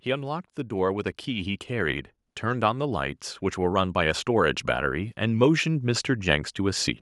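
From 0.05 s to 4.59 s the speech and its background swell together by about 8 dB: automatic gain rising, as the gain control slowly boosted an input it judged too quiet.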